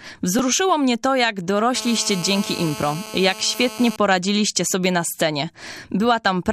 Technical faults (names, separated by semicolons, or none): repeated buffer; GSM phone buzz